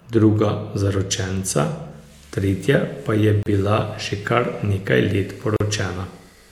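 At 3.43 s, right after "tretja pa je", the speech drops into a 33 ms hole, and again at 5.56 s for 39 ms: a gap at a join of encoded pieces, where separately encoded chunks kept their start delay and end padding, so the sound stops dead and resumes with smeared edges.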